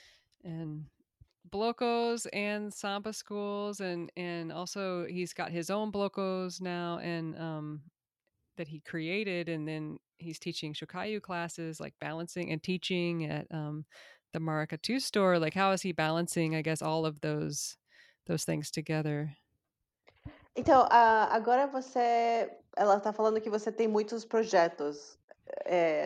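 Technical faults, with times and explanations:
No technical faults can be heard in the speech. Nothing here calls for a time or an explanation.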